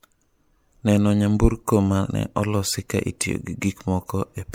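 Right through the speech there's a swirly, hollow smear and soft, blurred consonant attacks, with nothing above 19.9 kHz. That's generation loss, likely from MP3 encoding repeated about four times at what sounds like 96 kbit/s, with each pass piling up fresh quantisation noise.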